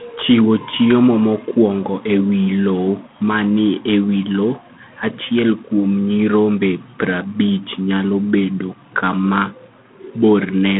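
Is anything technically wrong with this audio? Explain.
Yes. Throughout the speech there is G.726 ADPCM damage. Each sample is coded as a coarse difference from an adaptive prediction, and the rasping hiss that rises and falls with the speech level points to the 24 kbit/s mode. Nothing passes above 3.7 kHz. That level-following hiss sets it apart from plain telephone band-limiting.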